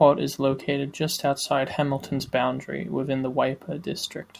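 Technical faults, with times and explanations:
Nothing here needs flagging; the speech comes through without any technical trouble worth a time stamp.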